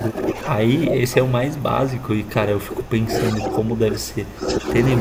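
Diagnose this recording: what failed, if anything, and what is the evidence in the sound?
In call processing, the speech is suppressed in double talk three times: 0.00 to 0.59 s, 0.87 to 3.14 s and 3.31 to 4.68 s. The level dips by about 10 dB at first, then by about 20 dB. The likely cause is an echo canceller ducking while both ends speak.

Also in call processing, echo leak appears from 4.45 to 4.64 s. A copy of the speech returns 400 ms late, about 15 dB below the direct sound, likely from a loudspeaker end's canceller letting residual echo through. Room reverberation would decay smoothly, but this is a discrete delayed repeat.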